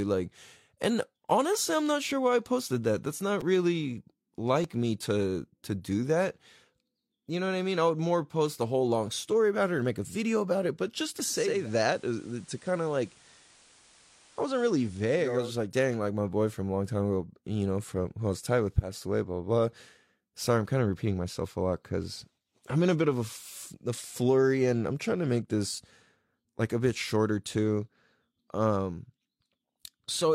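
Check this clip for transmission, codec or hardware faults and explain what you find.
Two kinds of fault turn up in this speech clip: a repeated buffer, heard twice, and a digital radio blend to analogue.

The repeated buffer occurs at 3.41 s and again at 4.63 s, just before "me to to do". Playback ran dry, so the device replayed its last 5.8 ms block, which fits a 256-sample buffer, twice more. Each is a brief buzzy click, and the waveform shows identical short cycles with hard joins.

From 11.28 s to 15.55 s, after "it but just to" and up to "like dang like my", the digital signal drops and the receiver cross-fades over 429 ms to the FM broadcast. Hiss sits roughly 30 dB below the voice and the level falls about 1 dB. On a spectrogram, a broadband noise floor appears.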